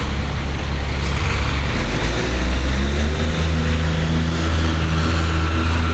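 A recording of everyday sounds with gain pumping throughout. The level swings by about 10 dB. Loud and quiet passages sit unnaturally close together, giving a squashed, breathing quality. The likely cause is input gain set far too high, with a fast limiter or compressor pulling it back on each peak. Nothing is heard above 8 kHz, which fits a call path using Opus at around 32 kbps.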